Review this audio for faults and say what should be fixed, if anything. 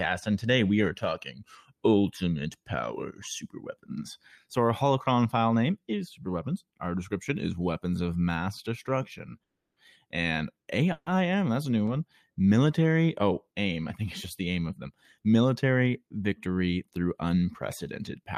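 Two call audio freezes occur. From 9.43 to 9.79 s there is a silent gap of about 330 ms. From 10.92 to 11.09 s, just before "that's a new", a 140 ms stall is filled with a fading buzz or hiss that ends in about 30 ms of silence. The likely cause is delayed packets draining the jitter buffer. The audio resumes where it stopped, so nothing is lost, but each stall adds delay. A larger adaptive jitter buffer or a steadier network path would prevent this.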